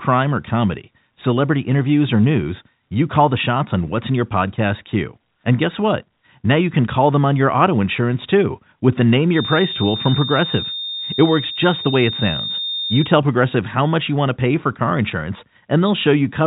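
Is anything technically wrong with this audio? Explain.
Yes. From 9.28 to 13.14 s, just after "insurance too with the", a feedback whistle appears, likely from a loudspeaker-to-microphone loop held at the edge of ringing: a thin, steady 3.6 kHz tone sits about 10 dB under the speech, swelling and fading slowly in level, within the narrow telephone band.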